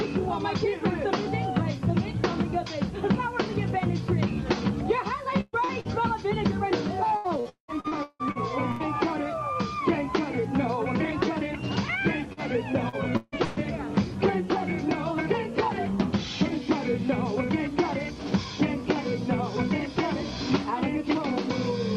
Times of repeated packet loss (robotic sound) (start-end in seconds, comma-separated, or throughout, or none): 7.17-8.83, 12.33-13.59